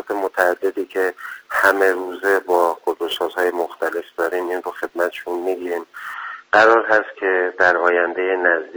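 From 0 to 6.14 s, a gritty hiss swells on loud, bright moments: sample clock jitter, with sampling instants wandering by roughly ten microseconds.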